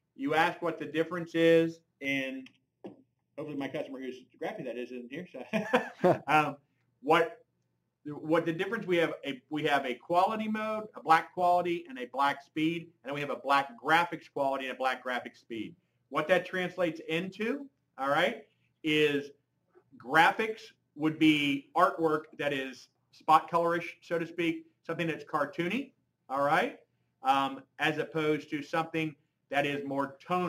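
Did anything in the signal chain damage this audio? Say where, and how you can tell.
Yes. From 2.05 to 5.65 s, channel delay (comb filtering) hollows the sound. At the buffer stage, one channel lags under half a millisecond before mono summing. A spectrogram shows evenly spaced notches, the first near 1.5 kHz.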